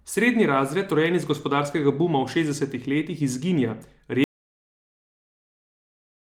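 At 4.24 s, right after "v šestdesetih letih izginja", the speech is cut off mid-flow by an audio dropout to silence. From there to the end of the clip, about 2.1 s, the signal is silent, with no room tone or noise floor remaining. The abrupt cut and dead-flat gap point to the input being lost while recording continued, likely a disconnected device, a failed link or an accidental mute. Anything spoken after that point is not recoverable.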